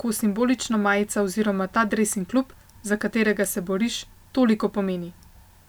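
Nothing stood out as a technical fault on listening to this recording of speech.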